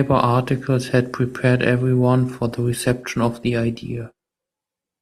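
At 2.31 s the adaptive stream switches to a lower bitrate after the connection slows, and stays there to the end. The quality of the speech changes abruptly, with more codec artefacts and no gap, which fits a drop from 64 to 24 kbit/s Opus.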